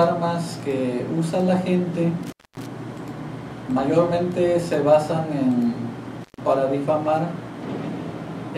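The audio drops out twice with crackle at the edges, from 2.23 to 2.66 s and 6.21 to 6.38 s, an intermittent contact where a loose connection briefly opens.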